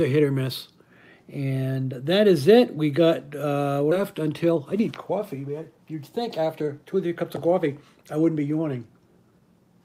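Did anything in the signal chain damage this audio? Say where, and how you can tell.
Yes. At 3.91 to 3.93 s there's a skip ahead, on the network path or in the jitter buffer: playback jumps straight forward with no fill, and about a second of audio is just gone. The two sides butt together almost directly, so the later audio was already queued when the earlier stretch was dropped.

Right after, from 4.01 to 8.38 s, there's a jitter buffer speed-up. The buffer was holding more than its target, so the receiver snipped out short pitch-period pieces over and over. That adds up to about 0.4 s, and the audio runs at 109% speed with the pitch unchanged, so it sounds a bit hurried.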